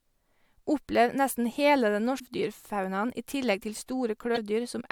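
At 2.16 to 2.21 s, and again at 4.33 to 4.38 s, the speech briefly breaks up. Each lasts about 55 ms. This is damaged data in a compressed stream. The decoder misreads corrupted frames, loses sync, and hunts for the next valid frame.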